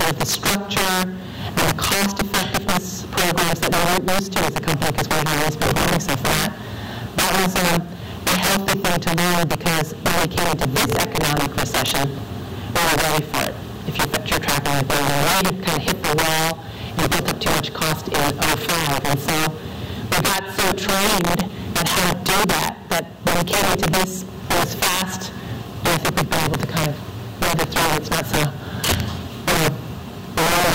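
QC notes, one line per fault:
Throughout, integer overflow: with about 11 dB of overdrive, around 7 percent of samples wrap to the opposite sign, cracking sharply on loud moments.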